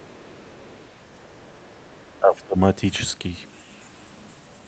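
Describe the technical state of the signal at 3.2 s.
At 3.2 s the speech is intact, with no dropout, click or distortion, only the ordinary call-path band limit that leaves nothing above 8 kHz.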